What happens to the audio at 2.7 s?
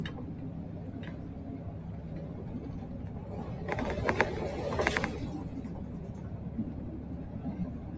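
At 2.7 s, as throughout the clip, a noise suppressor applied to music or sounds is at work. Tuned for speech, it treats sustained tones and decaying tails as noise and pulls them down by about 5 dB, so held sound sinks and pumps while attacks pass.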